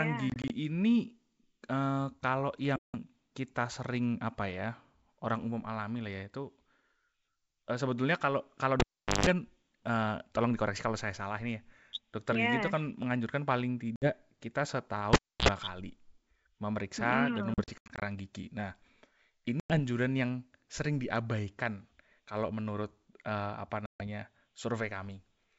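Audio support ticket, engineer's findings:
Packet loss on an ADPCM call. Hard-edged silent holes at 0.30–0.51 s (scattered, 20 ms gaps), 2.76–2.96, 13.96–14.08, 17.54–18.05 (runs to 80 ms), 19.60–19.79, 23.86–24.04 s. Decoder predictor and step size desync, giving slightly distorted speech before recovery.

Cable pulled and plugged in. 8.80–9.27 s: pop, about 0.42 s near silence, 50 Hz buzz burst, pop. 15.13–15.49 s: same pattern, about 0.30 s, 60 Hz buzz. Live cable pulled and reinserted; plug tip contacting before full seating.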